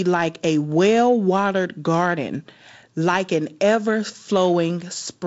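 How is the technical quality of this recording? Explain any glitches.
No glitches or faults heard.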